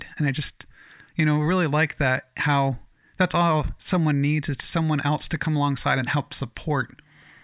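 Nothing in this recording stands out as a technical fault; the speech just carries on from the first moment to the last without any hiccup worth pointing to.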